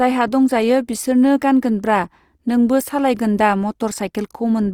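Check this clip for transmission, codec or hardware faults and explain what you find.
One fault runs through the whole clip: Opus compression, with plainly audible codec damage from start to finish.

The speech sounds grainy and rough, and its tones carry a noisy texture. This is likely the CELT music mode running short of bits, which fits a rate near 24 kbps. It keeps each band's energy but fills fine detail with folded or noise content. On a spectrogram the harmonics look speckled and smeared rather than clean, with few holes, and the full band extends to 20.4 kHz.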